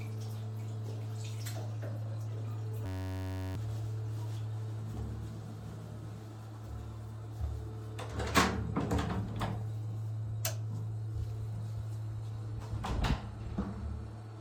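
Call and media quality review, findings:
Steady buzz replacing the audio, 2.86–3.55 s, about 0.7 s of sound lost. System hang loop: host or driver stalled while the output hardware replayed one 10.67 ms ring-buffer segment, 65 repeats at 93.8 Hz. This fits a 512-sample buffer.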